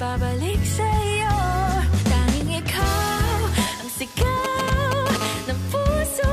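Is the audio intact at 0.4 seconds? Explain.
Yes, at 0.4 seconds the audio is intact, with no dropout, click, distortion or other fault at that moment.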